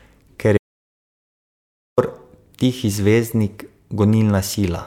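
From 0.58 to 1.98 s, an audio dropout to silence, likely a lost input, leaves 1.4 s of flat silent waveform and blank spectrogram.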